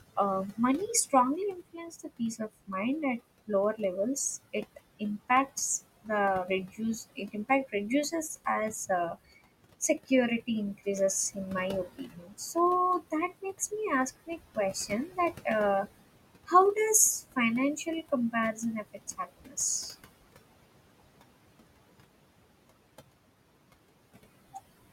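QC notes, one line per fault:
Throughout: noise suppressor artifacts. The suppressor pulls the room noise down by about 21 dB wherever it judges a band to be steady noise, frame by frame. The background, which sits only about 14 dB below the speech, sinks in the gaps and swells back under each phrase.
0.16–3.8 s, 6.03–9.32 s, 9.98–11.37 s, 11.97–13.72 s, 14.26–15.86 s and 17.36–19.57 s: speech cut by the noise suppressor. In each span, the suppressor mistakes quieter parts of the speech for noise and turns them down with the background. Drops reach about 14 to 20 dB, deepest near 6–9 s and 17–19 s. The affected speech sounds swallowed or faint, totalling about half a second in most spans, though only about 0.3 s in the span just after "me ask" and only a brief moment before "in my". The same happens between "in my" and "me ask", and again just after "me ask".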